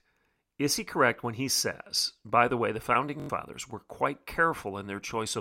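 Speech with a Bluetooth stutter from 3.20 to 3.30 s. A tiny slice repeats as a rapid buzz while the receiver replays stale data, covering about 85 ms, which fits four lost frames. Unlike a dropout, there's no silence, and speech resumes further along.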